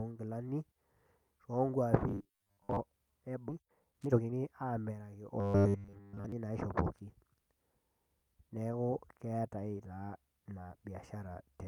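From 2.08 to 2.77 s the speech turns into a rigid, metallic buzz at 100 Hz. This is robotic sound from repeated short buffers. The likely cause is late audio being covered by replaying a 10 ms piece, for about half of this stretch.

At 3.49 to 3.51 s playback skips ahead with no gap filled. About a second and a half of audio is gone. The two sides are joined almost directly, so the sound jumps abruptly.

From 3.53 to 7.35 s comes a jitter buffer speed-up. The receiver cut short pitch-period pieces again and again to shed excess delay, removing about 0.7 s. The speech runs at 120% speed with unchanged pitch and sounds hurried.

Inside that stretch, from 5.40 to 6.32 s, the robotic buzz at 100 Hz returns and is stronger. Most of this span is likely made of repeated 10 ms buffers, so the speech keeps only a rough outline under the metallic tone.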